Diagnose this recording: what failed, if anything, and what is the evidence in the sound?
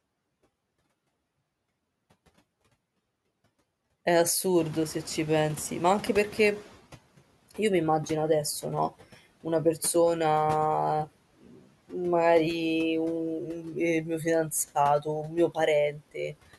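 The call-processing noise suppressor was slow to track a jump in room noise of about 16 dB near 4.5 s. From 4.58 to 6.79 s the background passes with little reduction, then sinks by about 10 dB as the estimate catches up over 2.21 s.

Speech was also cut by the noise suppressor, which mistook parts of it for noise and pulled them down with the background at 11.41, 13.46, 14.04, 15.23 and 15.92 s. Drops range from about 7 to 19 dB, deepest at 11.41 s, leaving brief stretches swallowed and faint.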